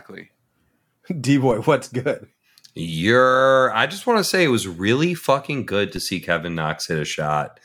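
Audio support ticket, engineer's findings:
DC step at 1.51 s and 5.96 s: waveform zero line jumps by about -22 dBFS, probably converter recalibration or an offset input switching in, then drains away through a 20 Hz high-pass. Each heard as a brief low thump; speech continues unchanged.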